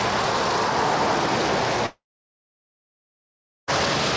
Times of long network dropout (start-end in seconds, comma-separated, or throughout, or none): 1.86-3.70